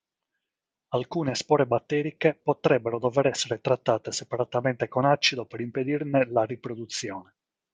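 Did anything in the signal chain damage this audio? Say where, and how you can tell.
No, nothing in the signal chain left an audible mark on this speech recording, and every stage appears to have passed the signal along intact.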